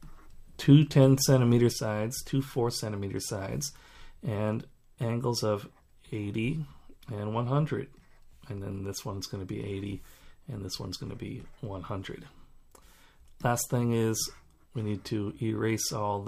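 At 1.72 s the level drops abruptly by about 6 dB and stays down to the end, a sign that one channel drops out, likely from a lost stereo channel before the mono sum. Unlike a plain gain change, material present only in that channel vanishes entirely.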